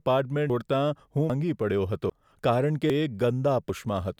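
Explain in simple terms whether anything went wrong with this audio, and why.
Yes, something went wrong. The speech skips forward five times, at 0.50, 1.30, 2.10, 2.90 and 3.70 seconds. The skip at 1.30 s comes just before "પડ્યો હતો", and the one at 2.10 s comes just after it. Each time, about a fifth of a second vanishes and the two sides butt together with no pause. This is audio missing between chunks. The even spacing likely means the sound was handled in one-second pieces, losing a bit at each handover.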